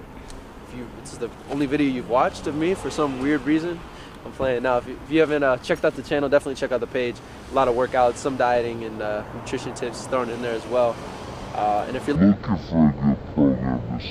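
At 12.16 s the last two seconds or so go wrong: it's a classic stereo read as mono. The interleaved left and right samples get played back-to-back as one channel, so each stereo frame turns into two consecutive samples. Everything suddenly drags along at half speed and drops a full octave, about 12 semitones down, right through to the end at 14.1 s, with a faint mirrored ghost of the sound sitting up in the top half of the spectrum.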